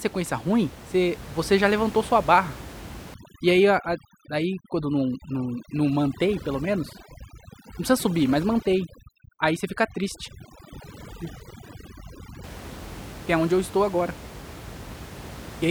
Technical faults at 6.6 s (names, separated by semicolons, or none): overdone noise removal